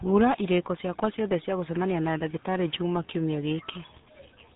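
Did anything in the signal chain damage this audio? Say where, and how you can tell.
Yes. RealAudio 14.4 codec damage runs through the whole speech clip. Nothing above 3.8 kHz survives, leaving the speech muffled and gargly. That thin, churning quality fits an 8 kbit/s dial-up codec, which discards the upper band and coarsely models what remains.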